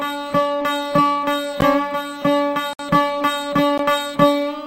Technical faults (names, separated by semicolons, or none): block of digital silence